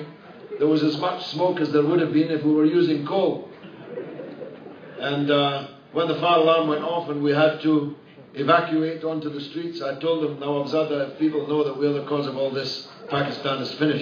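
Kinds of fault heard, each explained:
No faults are audible anywhere in this clip.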